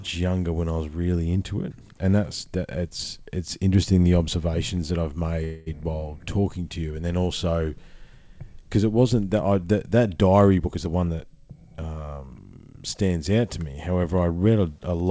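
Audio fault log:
5.44–5.68 s, call audio freeze: Right after "the observations that I've", a 0.24 s buzzy or hissy continuation of the last sound fades before "while talking to you" resumes intact, likely from held-up packets draining the jitter buffer. The spectrogram shows smeared, repeating harmonics; the waveform shows a decaying envelope with no silent gap.
10.60–11.63 s, jitter buffer speed-up: Between "I that that diary" and "um stands out to", the speech runs about 21% fast at unchanged pitch and sounds hurried. Around a fifth of a second of pitch-period slices was cut to shrink the buffer. The waveform shows compressed syllables, and harmonic spacing stays constant.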